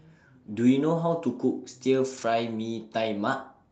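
From 2.17 to 2.35 s, five separate lost packets, about 100 ms of speech, were rebuilt from error correction: the decoder played the low-bitrate copies carried in the following packets instead of leaving a gap. The speech stays continuous but turns audibly rougher and noisier there, within the call's 8 kHz Opus bandwidth.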